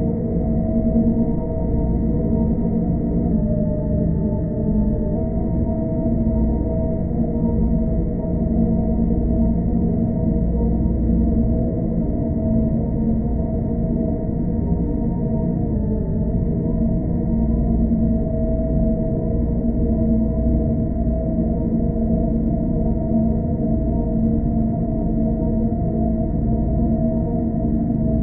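Drift correction steps at 3.32 to 5.16 s and 15.74 to 16.30 s. Both times the audio suddenly runs 5.67% slow and drops about a semitone (-101 cents), then snaps back. This is likely clock-matching software stepping the playback rate to manage its buffer.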